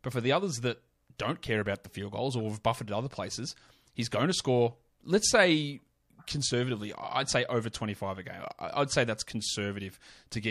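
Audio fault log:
1.17–1.19 s, pre-echo: about 12 dB of hiss smeared 25 ms ahead of an attack by a long codec block; spectrogram shows broadband haze preceding onset.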